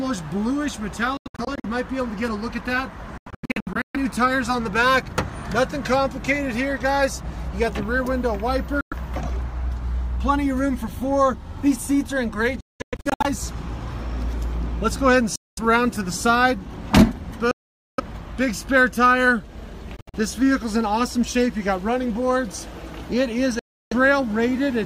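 Bluetooth dropouts cut the sound at 1.17–1.65, 3.18–3.96, 8.81–8.93, 12.61–13.26, 15.36–15.59, 17.51–18.00, 19.97–20.15 and 23.59–23.93 s, some as single gaps, others as bursts of short holes. The audio resumes further along each time, likely because wireless packets arrived too late and were discarded.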